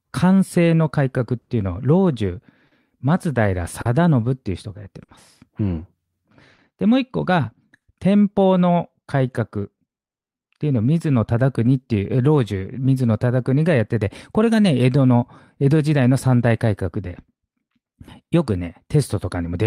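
Clock drift between sender and receiver runs through the whole clip. The sender's clock is slow by roughly 3 percent, so the receiver's buffer keeps draining. That timing hiccup recurs at uneven intervals rather than at one spot, which separates it from a single network glitch. The speech never quite sits on a steady pulse, and the effect comes in two stages.

First come six short stalls from a late packet, at 1.41, 2.67, 3.81, 5.03, 6.54 and 7.76 s. Each time the buffer runs empty, and the receiver holds the last sound for 40 ms, or 50 ms at 5.03 and 7.76 s, then resumes exactly where it left off. Nothing is lost. Each stall is a brief frozen smear with a faint buzz or dip, and the delay grows by the same 40 to 50 ms. A dropout would instead leave a gap and skip material.

From 9.06 s to the end, repeated timing corrections take over. The receiver now repeats small pieces again and again to keep pace, playing at an effective 97 percent speed and adding roughly 0.4 s overall. 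These edits all lengthen the audio and are spaced unevenly. Unlike the stalls, they never hold a sound still. They are tiny stutters, heard at most as a slightly dragging, unsteady tempo.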